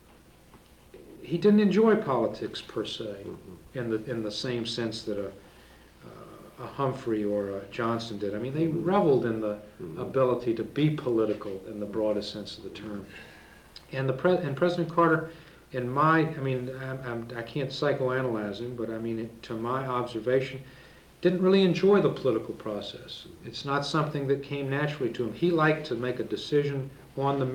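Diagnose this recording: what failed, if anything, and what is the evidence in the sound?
Nothing stood out on listening that would point to a failure at any stage of the chain.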